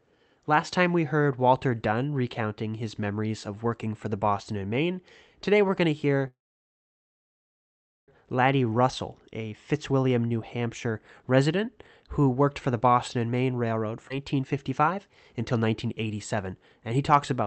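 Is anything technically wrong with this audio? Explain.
Yes, there are three separate timing faults in this speech, all heard through a call link whose audio stops at about 8 kHz.

From 6.27 to 8.10 s there is a call audio freeze. The sound hangs briefly and then goes silent for most of that 1.8 s stretch before resuming exactly where it left off. Delayed packets likely starved the jitter buffer, and the receiver bridged the wait with a fading tail and then silence. It differs from a skip ahead because no speech is lost. A pause has been inserted instead.

From 13.96 to 17.43 s there is a jitter buffer speed-up. The speech runs about 9% faster, so it sounds hurried and clipped, but the pitch does not rise. The receiver was holding more audio than it wanted. To work off the backlog, it repeatedly trimmed tiny pitch-period slices, removing roughly 0.3 s in total. It is spread out, so it is heard as a rushed pace rather than as audible jumps.

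At 14.09 to 14.12 s, inside that faster stretch, there is a skip ahead. Roughly half a second of speech is simply gone. The material on either side is butted together with almost no gap, because a block was dropped, on the way or by the buffer, while newer audio was already queued. Unlike the freeze, nothing is paused. Unlike the speed-up, the loss is one abrupt jump rather than a gradual hurry.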